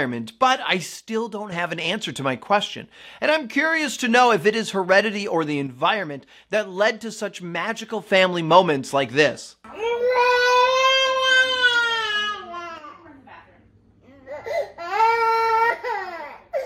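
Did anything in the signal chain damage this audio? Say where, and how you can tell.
Yes. One channel drops out at 0.96–1.52 s, 5.67–8.07 s, 12.78–13.06 s and from 15.70 s to the end. The level falls abruptly by about 6 dB, as a mono sum does when half its input vanishes, likely from an intermittent connection in one leg of the analogue stereo wiring.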